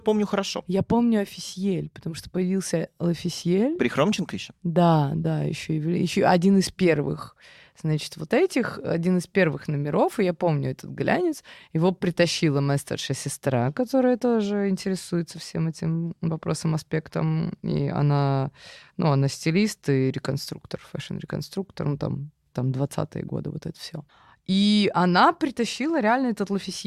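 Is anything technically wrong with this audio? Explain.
No, nothing stood out as technically wrong when listening through this speech recording.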